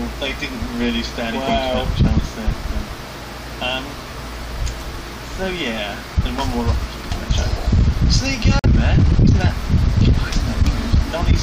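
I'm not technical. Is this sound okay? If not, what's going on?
No, there's one glitch. At about 8.59 s the sound cuts out for roughly 46 ms, then picks up at 8.66 s as if it had kept playing underneath. That's a Bluetooth dropout, likely a couple of wireless audio packets arriving too late and getting skipped.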